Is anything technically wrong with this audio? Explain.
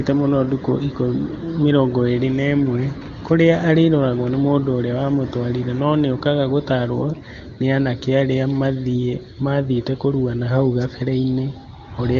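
No, nothing technically wrong is audible here.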